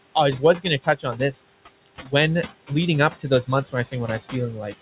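Throughout the clip, the noise suppressor is pulling down the frequency bands it treats as steady room noise by about 21 dB, frame by frame. These noise suppressor artifacts make the background sink in the gaps and swell back under the speech. The room noise itself sits about 15 dB below the speech, and the call path's bandwidth, nothing above 4 kHz, fits G.711 mu-law.

The same suppressor also misreads parts of the speech as noise, turning it down along with the background in five places. The cuts come at 0.39 to 0.66 s (about 15 dB deep), 0.82 to 1.33 s (about 17 dB), 1.86 to 2.13 s just before "leading up" (about 22 dB, the deepest), 3.47 to 3.94 s (about 13 dB), and 4.55 s to the end (about 18 dB). Each affects roughly a tenth to a fifth of a second of sound, leaving those stretches swallowed and faint.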